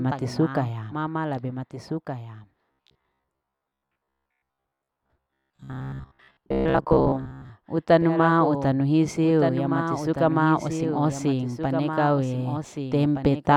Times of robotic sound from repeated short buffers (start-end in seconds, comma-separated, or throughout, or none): 2.71-7.51